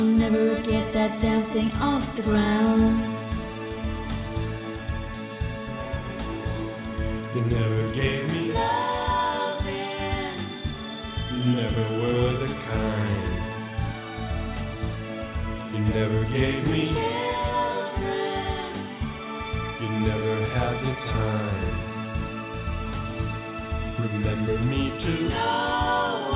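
Nothing here trips up the ear; the sound just rolls along without any technical hiccups worth pointing out.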